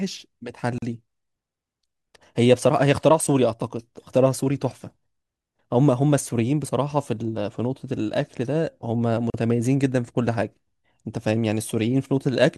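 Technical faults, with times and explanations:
0.78–0.82 s and 9.30–9.34 s, gap at a join of encoded pieces: The speech breaks off in a gap of about 41 ms, then about 39 ms. Each gap's edges are smeared by the codec. The sound then resumes exactly where it stopped. Separately encoded pieces were joined untrimmed. The silent start-up delay of one encoder run and the padded last frame of the previous run both remained at each join.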